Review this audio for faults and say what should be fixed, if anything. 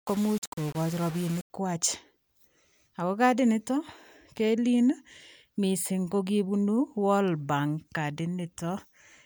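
From the start to 1.5 s the speech turns grainy and harsh, with the grit rising and falling with the speech and the quietest moments sputtering or dropping out. The likely cause is low bit depth without dither, with rounding to what sounds like about 5 bits, leaving distortion only around 20 dB below the speech. Unlike hiss or dithered noise, it vanishes in silence and follows the signal. Keep full resolution and apply dither before reducing bit depth.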